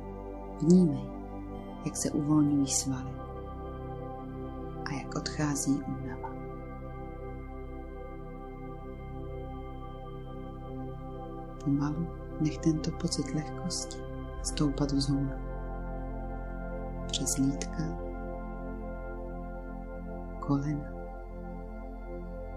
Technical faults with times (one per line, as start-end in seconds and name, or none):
none